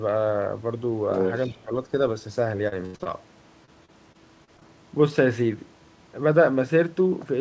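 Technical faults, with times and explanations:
1.11–1.52 s, other side's voice leaking through: A second voice sits under the talker, only a few dB below the main speech. This is likely loudspeaker playback from the far end reaching the microphone and not being fully removed by the echo canceller. On a spectrogram it appears as a second, fainter set of harmonic stripes that doesn't follow the main talker's pitch. In the waveform the envelope looks busier and less clean than in the surrounding speech.
1.53–1.71 s, speech suppressed in double talk: Right after the leak, the talker's level drops by about 15 dB for roughly a fifth of a second, so the voice sounds ducked and partly cut away. Because both sides were active at once, the echo canceller likely turned everything down rather than risk passing echo. The waveform shows a sudden notch in amplitude. On the spectrogram the energy fades.
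2.68–3.07 s and 3.65–4.63 s, repeated packet loss (robotic sound): Here the speech turns choppy. In the first stretch there are four holes, the longest 84 ms, and nearly half the span is patched. The second stretch has six shorter holes of up to 30 ms, with about an eighth patched. Each gap is filled by repeating the last sound, which gives the buzzing, robotic quality. On a spectrogram the harmonics freeze into flat, smeared bands ending in vertical seams. The waveform shows repeated, copied-looking cycles.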